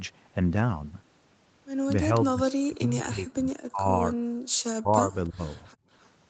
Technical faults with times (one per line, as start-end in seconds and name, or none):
2.10-3.87 speech suppressed in double talk
4.77-5.42 speech suppressed in double talk
5.13-5.29 echo leak
5.70-5.74 echo leak
5.75-5.88 background gated by the echo canceller
5.99-6.09 echo leak